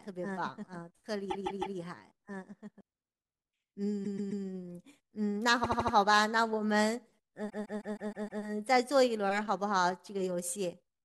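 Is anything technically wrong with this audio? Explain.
Yes. There are two kinds of fault.

From the start to 2.81 s, a doubled audio track is heard. It is already running when the clip begins. A second full-band copy of the speech trails the original by roughly one and a half seconds, about 5 dB quieter. It has no decay or room colour, so it sounds pasted on. It stops abruptly at 2.81 s. The likely cause is a second, slower capture path or an edit that left two copies out of step.

Repeated frames cause four stutters. A short block of compressed audio is played again several times in a row. From 1.29 to 1.77 s, a 157 ms block plays three extra times and adds 0.47 s. From 4.04 to 4.43 s, a 131 ms block plays three extra times and adds 0.39 s. From 5.63 to 5.94 s, a 78 ms block plays four extra times and adds 0.31 s. From 7.49 to 8.43 s, a 157 ms block plays six extra times and adds 0.94 s. 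Each block points to a short run of compressed frames that was written or sent more than once. Together the repeats make the clip about two seconds longer.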